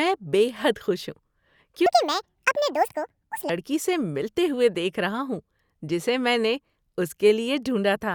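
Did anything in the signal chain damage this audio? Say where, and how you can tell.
Yes. Between 1.86 and 3.49 s the speech runs as a section at the wrong speed, likely from a playback or editing stage fitting that stretch to the wrong clock. The segment plays about 1.71 times too fast, so the voice turns hurried and jumps up by roughly ten semitones, close to an octave. Because speed and pitch shift together and snap back at the boundaries, it points to a rate mismatch rather than a deliberate effect.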